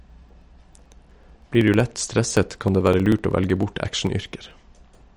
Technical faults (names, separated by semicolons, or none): MP3 compression; periodic USB or driver dropouts